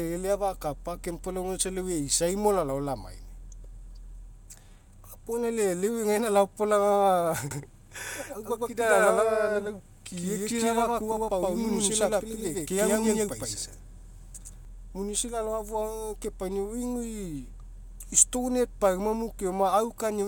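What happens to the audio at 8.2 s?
A doubled audio track runs from 7.51 to 14.65 s, so 8.2 s falls inside it. The speech is likely being captured twice, with one full-band copy trailing about a tenth of a second behind at roughly equal loudness. That gives a hard, roomless echo that starts and stops abruptly.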